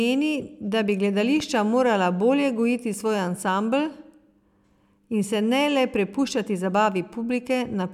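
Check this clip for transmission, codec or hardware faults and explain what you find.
One fault stands out: a single loud pop. It falls between 1.40 and 1.43 s, after "da bi" and just before "morala bolje gojiti svoj". A sudden voltage step or pulse, likely from a switch, plug, static discharge or driver glitch, was added to the signal, and the following circuitry shaped it into a brief transient. It sounds like a sharp click-thump a few dB louder than the speech, which carries on underneath. On a waveform it shows as a narrow spike standing above the surrounding speech. On a spectrogram it appears as a thin vertical stripe spanning the whole frequency range.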